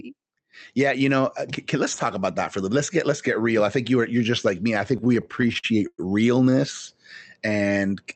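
Speech, carried over a WebRTC call path whose band stops near 8 kHz. From 4.97 to 6.00 s, right after "just like me I", there are repeated stalls (stutter): the jitter buffer ran dry 13 times, and the receiver filled about 270 ms by continuing the preceding sound, with the longest gap at 109 ms. Nothing is lost, but roughly a quarter of that second is filler, so the speech drags and stutters. A spectrogram shows repeated short stretches of frozen, copied harmonics. The waveform shows cycles repeating, fading in the longer gaps. From 6.50 to 6.54 s comes a short stall from a late packet: one packet missed its playout time, so the last sound was stretched by 16 ms before playback resumed at the same point, with no audio skipped. On a spectrogram this shows as a brief held slice of unchanged spectrum, and on the waveform as a short run of repeated periods.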